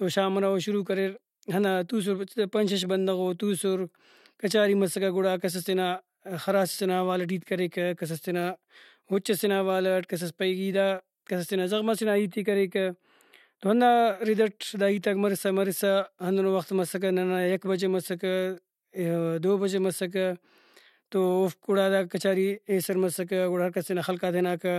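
From 12.03 to 13.81 s, just after "کس تینا زغم سے", there is channel delay (comb filtering). One channel lags by roughly four samples, about a tenth of a millisecond. Summed to mono, shared content cancels at spaced frequencies, the first near 5 kHz. The speech turns hollow and phasey.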